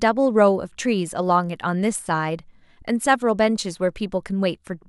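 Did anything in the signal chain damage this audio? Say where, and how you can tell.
No, nothing in the signal chain damaged this speech.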